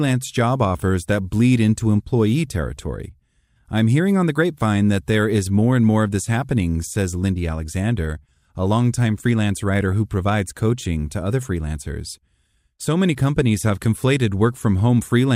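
At 8.26 to 8.29 s, just before "a longtime freelance writer", and again at 9.92 s, between that phrase and "who provides coaching to", weak reception lets bit errors slip past the error correction into the MP2 stream. This is DAB burbling. Corrupted samples put short blips of noise into individual sub-bands, at an error rate well under one percent.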